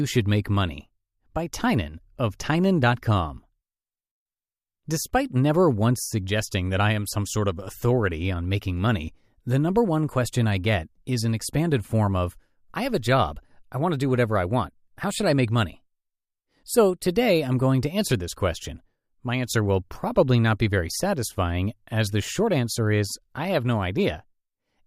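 No technical fault can be heard anywhere in this speech recording. There is nothing at any point in the audio that calls for a fault to be described.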